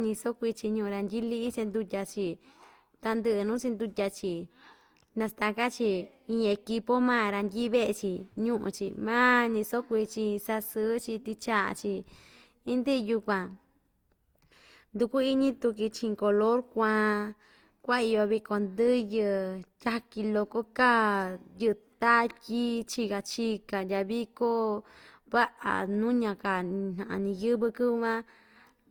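Generation loss runs throughout the speech, from start to finish. The sound is swirly and hollow, with smeared consonant attacks and a watery texture beyond what a single pass at this quality would leave. That points to an Opus stream at around 48 kbit/s, likely decoded and encoded again so that it went through the codec about three times, each pass quantising on a shifted frame grid so that noise accumulates. The band itself still reaches about 20.2 kHz.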